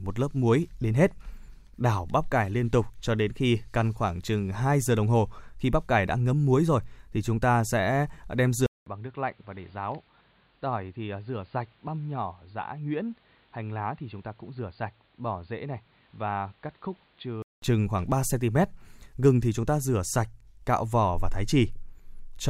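At 8.66 s the speech drops out for about 200 ms, then comes back dull and boxy, nothing above 4.7 kHz, roughly 10 dB quieter, over noise about 30 dB down. That's likely an input switched to a poorer device, until 17.62 s.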